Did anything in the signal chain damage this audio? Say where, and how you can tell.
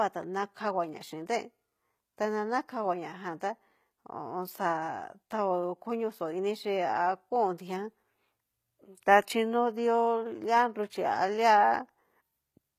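Yes, at the codec stage: throughout, the speech's treble is gritty and lispy and nothing sits above 14.9 kHz, likely HE-AAC compression at a low rate consistent with about 20 kbps.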